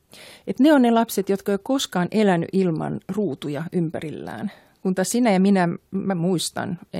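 No technical faults occur at any point in the speech, so there is nothing to describe in time order.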